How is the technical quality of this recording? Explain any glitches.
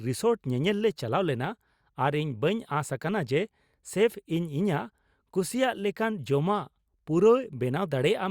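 The technical quality of this recording is good, with no glitches to explain.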